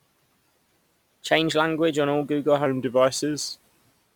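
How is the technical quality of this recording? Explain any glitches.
From 2.66 s to the end, a section plays at the wrong speed. It runs at 0.893 times normal speed, so the speech slows and drops about two semitones. Speed and pitch shift together. The likely cause is playback against a mismatched clock.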